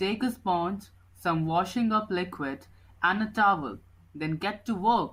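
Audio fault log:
No faults found; the speech is clean throughout.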